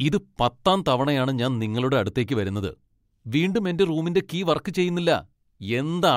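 No technical faults are audible.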